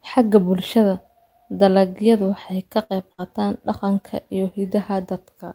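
A burst of packet loss strikes twice, at 2.83 to 2.94 s and 3.12 to 3.21 s. Audio arrives missing or too late, so the receiver stretches the last sound for about 60 ms, fading it out, then skips ahead, dropping about 60 ms of speech.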